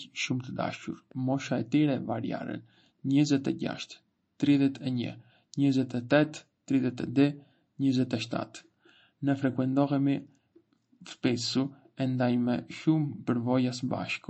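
From start to finish, the speech has plainly audible watery, swirling smear, with nothing above about 8.3 kHz. The likely cause is MP3 compression at a starved bitrate, which fits something near 35 kbps. Short of bits, the encoder cut the treble at a fixed point and dropped weak frequency lines that flicker in and out between frames. That flickering, with s sounds turning metallic and attacks blurring, is what separates it from a simple low-pass filter, which would only dull the sound.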